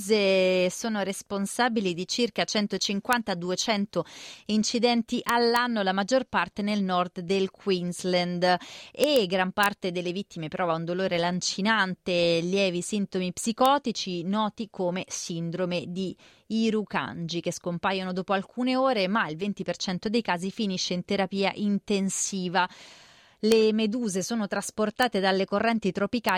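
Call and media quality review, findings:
Integer overflow on speech peaks: sharp cracks at 3.13 s, 5.29–5.56 s, 9.04–9.16 s, 9.63–9.66 s, 13.66 s (after "dolore lancinante lievi sintomi"), 23.52 s, 25.03 s and 26.29 s. Peaks barely reaching full scale wrap to the opposite sign instead of saturating. Check unclamped gain or mix stage.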